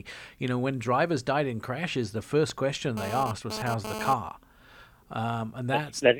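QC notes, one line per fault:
2.50–4.14 s, GSM phone buzz: right after "died in crashes the", a hard, raspy buzz at 216.7 Hz with dense harmonics sits about 6 dB below the speech. A nearby 2G handset's bursts during a data transfer are rectified by the audio circuit, so the buzz comes and goes.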